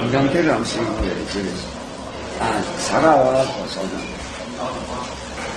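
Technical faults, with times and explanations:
Throughout, transcoding between lossy codecs: nothing survives above 12 kHz, and different flavours of swirly, smeared artefacts pile on each other. That's likely stacked low-bitrate passes, MP3 into AAC into Opus, each encoder spending bits re-coding the last one's damage.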